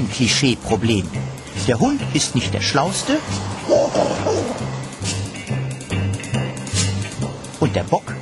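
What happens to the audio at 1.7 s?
Nothing goes wrong at 1.7 s; the audio plays through that moment intact, with no fault to be heard.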